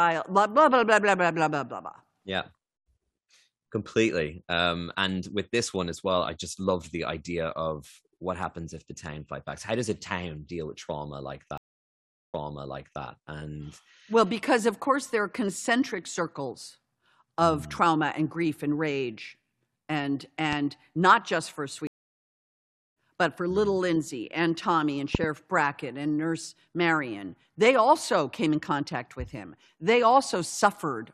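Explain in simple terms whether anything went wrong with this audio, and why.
Two things went wrong in this speech clip.

The first is a stream reconnect, which happens twice. At 11.58 s, after "deal with trauma like", the sound stops for 0.75 s. The player lost its connection and started again. When it comes back at "and well because of", it repeats about 0.7 s that you already heard. At 21.87 s, after "not just for", there is a 1.09 s gap. This time about 0.7 s is skipped, and it resumes at "but for mm little".

The second is a loud pop. A single sharp pop sits on top of the speech from 20.53 to 20.55 s, between "grief and rage and" and "not just for". It is much louder than the talking. From 25.15 to 25.26 s there are two pops in quick succession. The speech carries on underneath both times. A sudden electrical jolt, likely from a plug, a switch or static, was added to the signal.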